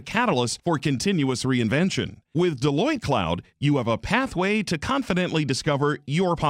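From 3.62 s to the end, the speech carries a crude rate conversion: the audio was resampled from 44.1 kHz to 48 kHz by straight-line interpolation between samples, with no anti-imaging filter. The interpolation error sits roughly 40 dB below the signal and forms shifted, inharmonic copies of the speech, heard as a faint gritty fizz that rides on loud and bright syllables. A spectrogram would show faint, non-harmonic lines and mirrored images of the speech energy above it, while the waveform looks essentially unchanged.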